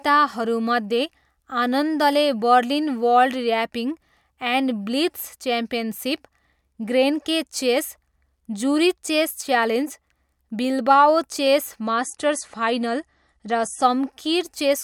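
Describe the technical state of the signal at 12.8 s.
At 12.8 s the speech sounds duller, with nothing above 11.3 kHz and a rise in smeared, watery codec artefacts. The change arrives abruptly at 11.83 s, with no gap, and clears at 13.83 s. It is an adaptive stream at a lower bitrate: the player switched to a leaner encoding while the connection slowed, which fits MP3 falling from 128 to 48 kbit/s, then switched back.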